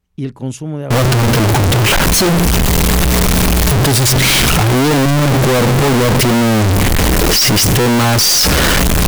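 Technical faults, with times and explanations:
0.91–9.07 s, float read as integer: from here to the end the speech turns into a loud, harsh, near-square wave at an almost fixed, high level, with the background noise as loud as the talking, though pitch still comes through. This is likely 32-bit float samples being read as 32-bit integers.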